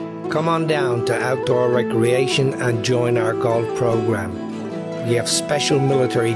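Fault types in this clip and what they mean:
No faults can be heard anywhere in this audio.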